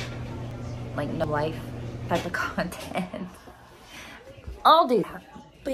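A likely dropped buffer (overrun) at 0.51, 1.24, 2.09, 3.97 and 5.04 s makes the audio jump ahead, skipping roughly 150, 150, 40, 100 and 100 ms respectively, shortest at 2.09 s.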